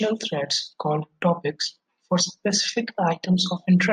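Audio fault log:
Nothing stood out on listening to this speech recording.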